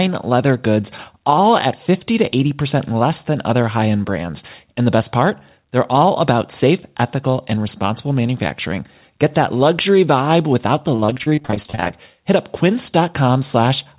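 Repeated packet loss (robotic sound) runs from 10.96 to 11.91 s, right after "luxury vibe without the": a rapid string of gaps up to 30 ms each, which the receiver patched by extending the preceding sound. That concealment covers 44% of the stretch, producing choppy sound with pieces missing within the narrowband, 4 kHz-limited call audio.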